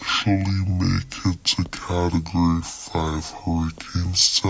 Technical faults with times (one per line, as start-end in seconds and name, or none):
0.00-4.49 wrong sample rate